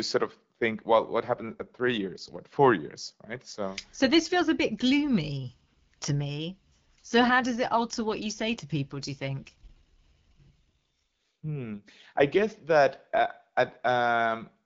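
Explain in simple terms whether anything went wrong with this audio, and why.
The speech turns rough and synthetic twice: 1.19 to 2.46 s, after "sort of think well", and 9.47 to 11.77 s. This is an AMR rate drop. A weak phone link cut the voice's bits.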